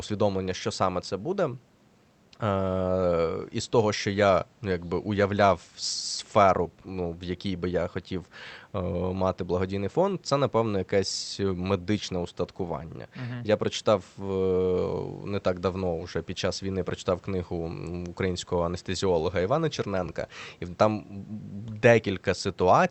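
No technical faults can be heard in the speech, which comes over a call path whose top end stops at about 8 kHz, with faint room noise about 39 dB below the voice.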